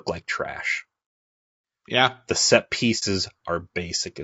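From the first moment the speech has a rough, grainy edge: there's a hiss sitting between the harmonics, and the top end sounds thin and a bit synthetic. That's most likely low-delay AAC compression, the AAC-ELD kind used on video calls, at a rate that sounds like roughly 32 kbps. Its short frames can't pin down pitch harmonics well, so at this rate the coder runs out of bits and the fine structure smears into noise. The damage is plainly audible all the way through.

Then from 2.99 to 3.03 s there's a brief dropout, an AAC frame loss with muting. A chunk of coded audio never made it, so the decoder just zeroed that stretch instead of guessing at it. Because the overlapping windows taper either side, the sound fades down and back up rather than chopping, leaving a brief dip.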